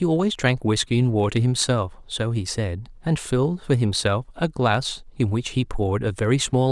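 From 0.12 s to 6.71 s, clock slip clicks run through the speech. They come roughly every 40 ms, around 150 in all, and blur into a soft rattle. The likely cause is two unsynchronised clocks about 0.1 percent apart. Each slip drops or repeats one sample.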